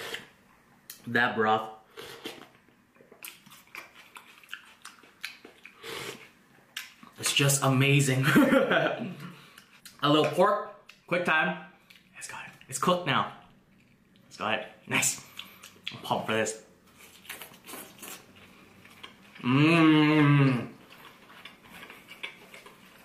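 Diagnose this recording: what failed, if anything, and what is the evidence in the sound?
Nothing in the signal chain shows signs of failure here, and none of the stages from capture through playback leaves any audible evidence of a fault in the sound.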